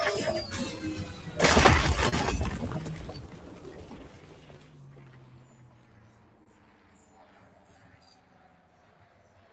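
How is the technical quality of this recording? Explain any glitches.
The recording has audible technical problems. A noise suppressor works against the sound the whole way through, the timing wobbles from clock drift, and two short stalls interrupt the flow. The spectrum stops at 8 kHz, which fits a call path using a codec like Opus at around 32 kbps.

Noise suppressor applied to music or sounds, throughout: a speech-oriented suppressor treats sustained tones, ambience and decaying tails as noise and pulls them down, by roughly 10 dB at its deepest. Onsets pass through while held material sinks, so the level pumps and the tails thin out. On a waveform, the envelopes collapse quickly after each attack. On a spectrogram, the steady partials and reverb fade into patchy, flickering gaps.

Clock drift between sender and receiver, throughout: the sending device's clock runs about 2% slow compared with the receiver's. 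The jitter buffer keeps drifting toward empty, so the receiver has to keep patching timing, and small hiccups recur at uneven intervals. A waveform shows tiny discontinuities scattered irregularly. A spectrogram shows occasional thin vertical seams where the material is joined, with no fixed rhythm to them.

Short stall from a late packet, at 2.09 to 2.14 s and 6.44 to 6.48 s: in each case a packet arrived late and the buffer ran dry. The receiver stretched the last sound, for 33 ms and then 26 ms, and resumed from the same point, so nothing is lost. What you hear is a brief held smear with a slight buzz or dip. On a spectrogram, each stall appears as a short frozen, horizontally smeared block. In the waveform, there is a small repeated-looking stretch.

Repeated timing corrections, from 3.27 to 9.42 s: to keep up with the slow sender, the receiver repeatedly inserts short stretches of audio, all in the same direction. 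Together they play that span at about 98% speed and add roughly a tenth of a second overall. The result sounds like slight hiccups and a subtly dragging, uneven tempo. On a waveform, some cycles appear duplicated. A spectrogram shows faint splice seams at irregular spacing.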